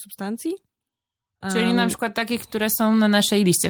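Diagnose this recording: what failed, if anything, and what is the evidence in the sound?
Call-processing automatic gain rising: the gain control judged the input too quiet and climbed about 8 dB from 1.41 to 3.67 s, swelling speech and background together.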